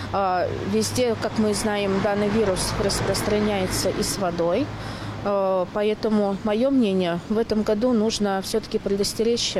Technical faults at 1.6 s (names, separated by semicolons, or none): none